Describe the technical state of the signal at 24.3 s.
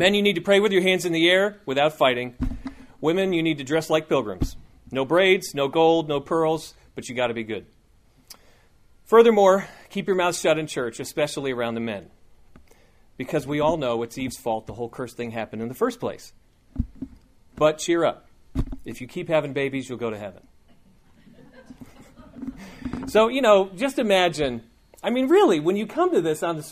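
At 24.3 s the signal is intact, with no dropout, clipping, glitch or other fault to be heard at that point.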